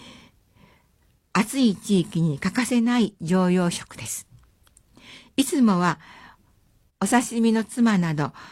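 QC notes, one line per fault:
2.69–2.73 s and 6.67–6.71 s, overlap between stream segments: at each point roughly 40 ms of speech is missing, and the waveform jumps across the gap, producing a small skip. The timestamps of neighbouring stream segments, which appear to be about 2 s long, overlap slightly. The player discards the overlapping span as if it were repeated audio, but that audio was not duplicated, so real signal is lost at the segment boundary.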